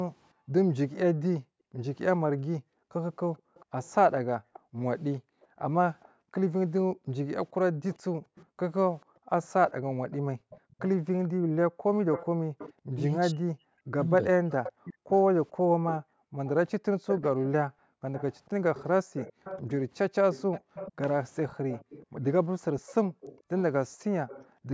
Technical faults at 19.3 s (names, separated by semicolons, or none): echo leak; background gated by the echo canceller